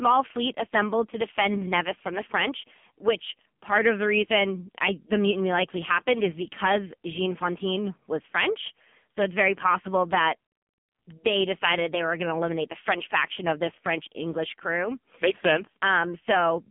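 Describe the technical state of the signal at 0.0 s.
At 0.0 s the speech already carries AMR narrowband mobile codec damage, which lasts throughout. Nothing passes above 3.5 kHz. Unlike a plain telephone filter, the heavy pulse-driven vocal-tract modelling makes it buzzy and synthetic, which fits a bitrate near 5.9 kbps.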